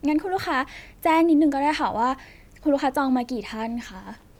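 No technical faults are audible anywhere in the speech.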